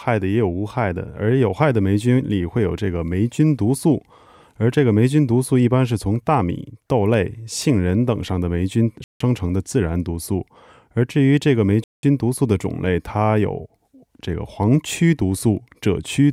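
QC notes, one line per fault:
9.04 to 9.20 s and 11.84 to 12.03 s, Bluetooth stall: the speech drops to dead silence for 164 ms, then 193 ms, and resumes where it broke off. The likely cause is interference delaying packets, so the headphone buffer emptied until retransmissions arrived.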